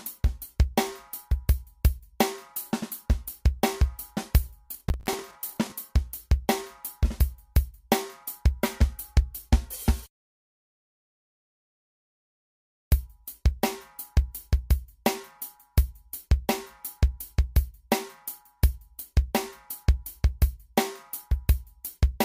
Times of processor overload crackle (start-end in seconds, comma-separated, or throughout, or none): 4.74-5.72